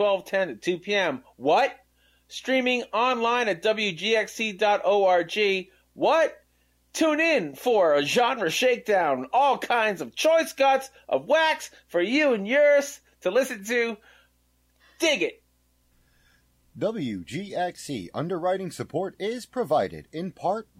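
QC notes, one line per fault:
No faults were found on this listen, with no audible dropouts, clicks, distortion or level problems anywhere in the clip.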